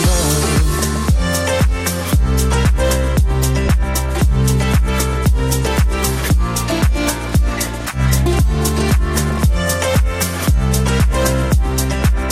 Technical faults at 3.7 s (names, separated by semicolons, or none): MP2 compression